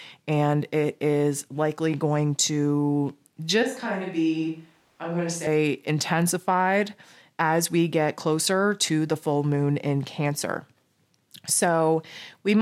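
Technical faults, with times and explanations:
2.65 s, dropped samples: a single sharp click, likely from roughly one missing sample making the waveform jump, seen as a thin vertical line across the spectrogram.
3.63–5.47 s, switch to a distant microphone: the speech turns hollow and roomy, about 5 dB quieter with less bass and a raised noise floor, likely from a faraway microphone. There are abrupt edges on the waveform and a thinner low end on the spectrogram.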